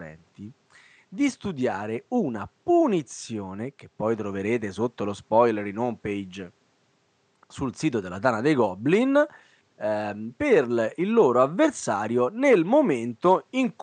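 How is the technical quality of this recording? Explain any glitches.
Nothing stood out on listening to this recording, with only a faint room noise sitting about 44 dB below the speech.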